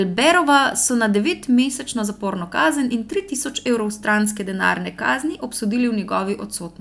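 The speech signal stays steady and continuous throughout, with no audible technical faults at any point.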